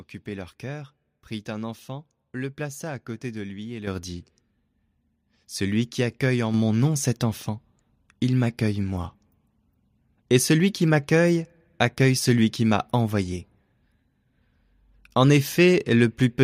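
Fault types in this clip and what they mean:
Microphone volume stepped up: speech and background noise jump louder together by about 8 dB at 3.87 s, then by about 4 dB at 6.54 s, because the call software judged the microphone too quiet and raised its input gain in single steps.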